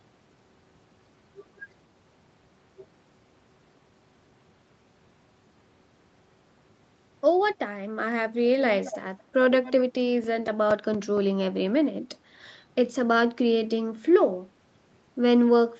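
At 8.84 to 8.98 s and again at 9.64 to 9.82 s there's an echo leak, a faint copy of the speech trailing about 225 ms behind and sitting well under the main level. Likely a loudspeaker on the far end whose echo canceller let some pickup slip back through.

Then from 10.01 to 11.18 s come six CD scratch ticks, short regular clicks and micro-dropouts, none longer than a few milliseconds. A blemish wiped out more data than error correction could rebuild each revolution, so the player patched or muted those samples.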